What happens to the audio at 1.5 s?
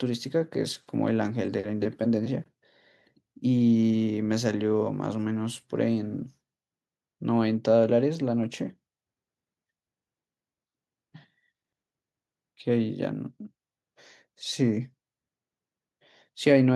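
Nothing goes wrong at 1.5 s: the speech carries on without any dropout, glitch or other fault at that point.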